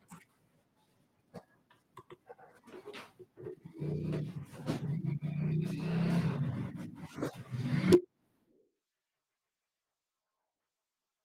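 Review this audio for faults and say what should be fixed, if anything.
At 7.93 s there's a short burst of microphone overload: the loudest peak of the speech gets a harsh, crackly edge, with the waveform pushing about 4 dB past full scale and a fair chunk of that moment, roughly a fifth of the samples, flattened at the top. The likely cause is the mic input gain sitting too high, so the converter runs out of headroom and squares off the peaks. Setting the input level so normal loud speech peaks well below full scale would prevent it.

Right after, at 7.95 s, the microphone volume gets stepped down: speech and background both drop by about 3 dB in a single jump rather than easing down. That sudden step right behind the distorted peak sounds like automatic gain control reacting to the clipping and cutting the device's input volume in one go. Turning off automatic mic adjustment in the call software, or starting at a sensible fixed gain, would stop the jump.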